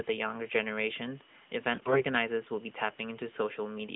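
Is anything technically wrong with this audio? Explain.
Yes. From 1.74 to 2.04 s the speech is hit by AMR bit errors. It sounds hoarse, scratchy and gargly, while pitch and loudness stay roughly in place. The sound points to a weak radio link flipping bits in the less protected parts of the AMR narrowband frames, at a heavy rate of around 15 percent. The checksum over the critical bits still passes, so the decoder accepts these frames and misplaces its excitation pulses and fine pitch, gain and spectral values. The surrounding narrowband mobile sound, limited to roughly 150 Hz to 3.7 kHz, shows only light codec coloration.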